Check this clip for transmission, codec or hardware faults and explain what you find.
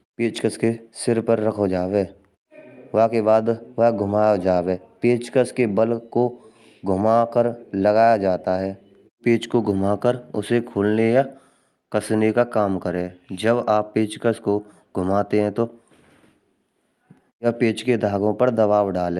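Nothing here points to a transmission, codec or hardware problem. The speech comes over an ordinary call path whose Opus coding rolls the top end off at around 12 kHz, exactly as that link normally does.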